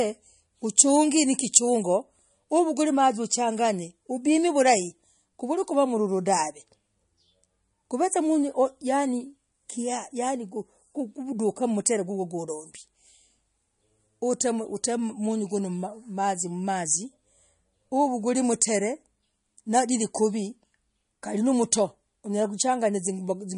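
Throughout the speech, treble stops dead above 10.6 kHz and sibilants swirl watery, likely MP3 compression at a starved bitrate, around 40 kbps, zeroing weak bands.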